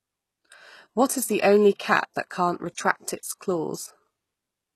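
HE-AAC compression, likely the cause of the damage heard throughout the speech, codes only the lower spectrum at what sounds like about 16 kbps and rebuilds the treble from copied lower bands, cut off at 12.3 kHz, so s sounds turn gritty and metallic.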